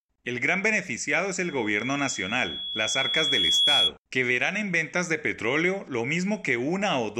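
From 1.4 s to 3.9 s, after "gran beneficiado es", a microphone picks up its own loudspeaker and loop gain exceeds one at 3.4 kHz. The resulting loudspeaker feedback squeal swells over about two seconds to roughly 5 dB above the speech, stopping before "que verán en ventas".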